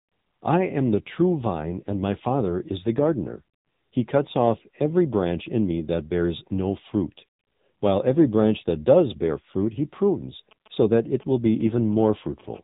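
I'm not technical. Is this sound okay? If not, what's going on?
No, it isn't. There are three separate problems.

The whole recording has been through the AMR narrowband mobile codec, the compression used for ordinary 2G and 3G phone calls. Everything above about 3.8 kHz is gone, so the speech sounds muffled and boxy. Because so little data is kept, the voice also sounds buzzy and artificial. Unlike the other two problems, this one never stops and isn't an added noise. It's the voice itself that has been degraded.

From 10.51 to 12.41 s you can hear GSM signalling bursts. A nearby 2G phone was briefly talking to the network, and the recording equipment picked up its radio pulses as sound. It comes out as a galloping dit-dit-dit of short rough buzzes. It stays in the background under the speech, and its stop-start rhythm is what separates it from the steady buzz that follows.

From 12.54 to 12.59 s there is a brief GSM phone buzz. 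This is the same kind of phone interference, but here the phone was transmitting steadily in rapid bursts, 217 times a second, as it does during a call. The result is an unbroken, harsh, raspy tone at about 217 Hz rather than a stuttering pattern. It is louder than the earlier bursts and has nothing to do with the speech.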